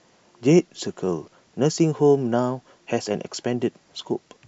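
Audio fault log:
No fault to log.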